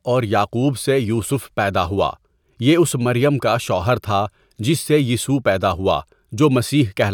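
Speech, with no technical fault to point to anywhere in the recording. Nothing in it calls for a time, a cause or a correction.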